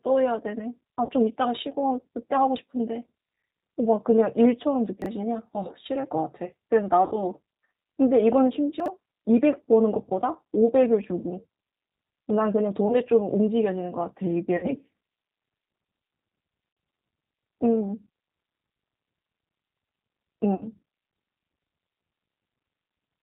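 G.729 coding runs through the whole of this speech clip. The voice is rebuilt from a vocal tract filter, a pitch predictor and a handful of pulses per frame, using the 8 kbit/s G.729A variant. The damage is plainly audible: nothing above 4 kHz survives, so the speech sounds narrow, and the sparse pulse excitation gives it a rough, slightly synthetic grain. VoIP packet loss concealed by the speech codec occurs at 1.05 to 1.1 s, 7.06 to 7.2 s, 12.88 to 12.96 s, 14.57 to 14.68 s, 16.73 to 16.77 s and 20.55 to 20.65 s, with 20 to 60 ms of audio missing each time. The longer gaps fit runs of three lost 20 ms packets. The decoder fills each gap by extending its last pitch and filter state at a falling gain, so the sound smears into a buzzy tone or coloured noise that fades. Because each frame builds on the one before, the voice stays weak or distorted for a short while after real audio resumes, which is why the disturbed stretches outlast the losses themselves. 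Chunks out of order occur at 5.02 to 5.06 s and 8.8 to 8.88 s. In each case a 20 ms chunk turns up late and plays after audio that should have followed it, one chunk late at 5.02 s and three chunks late at 8.8 s. No audio is lost, but the wrong order leaves abrupt joins and makes those moments sound briefly jumbled, with the 8.8 s event spread wider.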